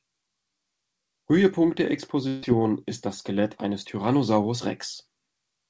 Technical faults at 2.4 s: burst of packet loss

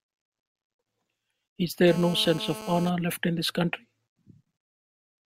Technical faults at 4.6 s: none

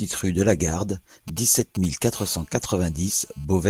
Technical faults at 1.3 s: GSM signalling bursts

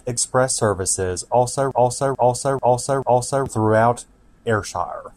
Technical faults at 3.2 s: broken-record loop

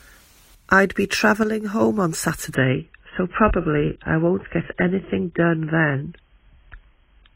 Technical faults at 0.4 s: none

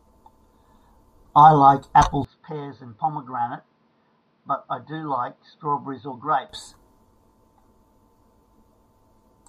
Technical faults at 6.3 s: input switched to a poorer device

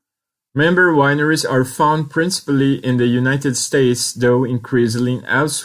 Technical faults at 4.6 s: none

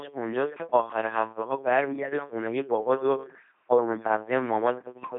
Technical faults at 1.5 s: LPC-10 vocoder

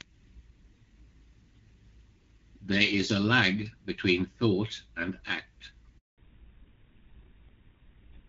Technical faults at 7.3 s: fallback to narrowband

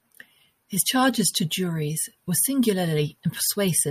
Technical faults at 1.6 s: none

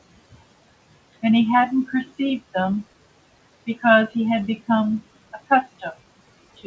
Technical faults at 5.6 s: noise suppressor artifacts; clock slip clicks; speech cut by the noise suppressor

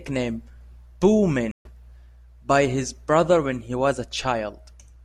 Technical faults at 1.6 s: stream reconnect

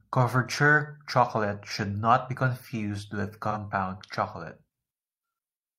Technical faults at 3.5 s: AAC frame loss with concealment

